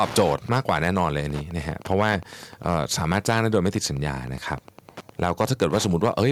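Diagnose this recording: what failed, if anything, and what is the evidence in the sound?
Wi-Fi interference is reaching the analogue wiring: a nearby radio's transmissions are rectified in the microphone circuit. Throughout the recording there is a steady tick repeating every 102.4 ms, about ten per second, sitting roughly 20 dB below the speech.

Microphone overload, likely from an input volume set too high for the converter, flattens the loudest peaks. The harsh, crackling edge appears at 0.0–1.08 s (about 6 dB over), 1.91–2.12 s, 2.66–2.77 s (about 1 dB over), 3.04–3.55 s and 5.23–6.23 s (about 3 dB over each), with only a small fraction of samples clipped.

Microphone volume stepped down at 0.2 s, likely the call processing reacting to the clipped opening by cutting the device's input gain in one step. Speech and background drop together by about 2 dB, abruptly rather than as a smooth fade.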